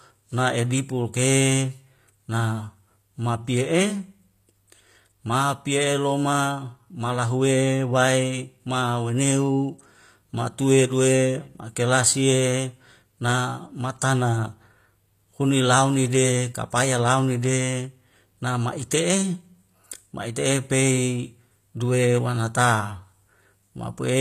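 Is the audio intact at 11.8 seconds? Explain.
No, the speech sounds gritty and lispy on s sounds, with nothing above 14.9 kHz, throughout the clip. Likely HE-AAC compression at a low bitrate, around 24 kbps, rebuilding the treble from copied lower bands.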